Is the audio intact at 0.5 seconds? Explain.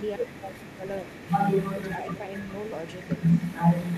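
No. Between 0.16 and 0.84 s there is speech suppressed in double talk: with both sides likely talking at once, the echo canceller mistook this talker for loudspeaker echo and turned it down. The speech dips by as much as about 30 dB and breaks up.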